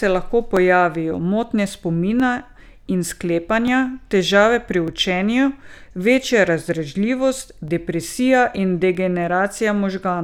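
The stream likely lost a brief run of samples, under a millisecond each time, so the speech waveform jumps abruptly. These dropped samples sound as four sharp clicks, at 0.57, 2.2, 3.68 s (just before "težave pri") and 4.88 s (just after "težave pri").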